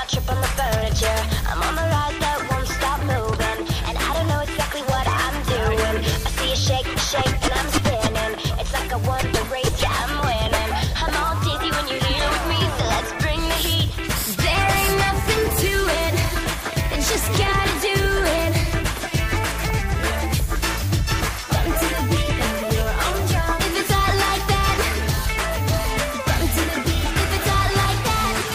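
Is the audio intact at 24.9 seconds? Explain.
Yes, at 24.9 seconds the audio is intact, with no dropout, click, distortion or other fault at that moment.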